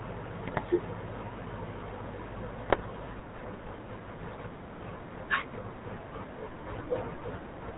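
From start to finish the speech passes through the GSM full-rate codec, which fits a 13 kbps stream. The vocal tract is modelled and excited by a sparse, regularly spaced pulse train, and nothing above 4 kHz survives, so the voice sounds buzzy, gravelly and band-limited.

GSM bit errors strike from 0.46 to 0.64 s and again from 2.70 to 2.88 s. Corrupted filter, pitch and gain parameters reach the decoder over several consecutive frames, so the spectrum warps and the level jumps, and the speech breaks into brief squawks, pops and gargling.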